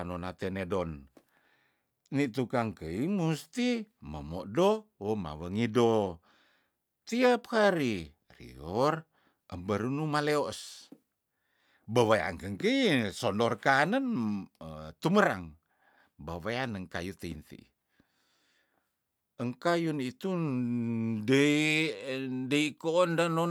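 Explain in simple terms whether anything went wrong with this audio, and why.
Nothing went wrong with this audio; the recording carries no audible faults at any point.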